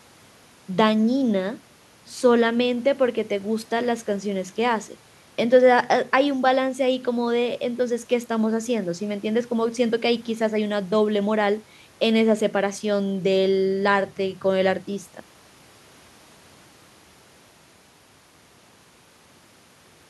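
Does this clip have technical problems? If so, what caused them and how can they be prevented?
No technical faults are present.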